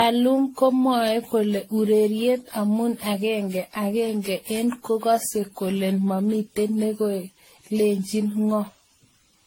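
Throughout the speech, nothing reaches above 16.6 kHz, and the sound is swirly, hollow and smeared, with blurred attacks. This is likely generation loss: repeated re-encoding, about fifteen times, fitting 64 kbit/s AAC-LC.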